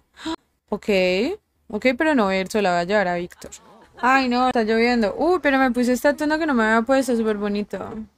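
At 0.35 to 0.38 s and again at 4.51 to 4.54 s, a CD skip briefly mutes the sound with a tick, then resumes from a different point on the disc, unlike a dropout, which resumes where it stopped.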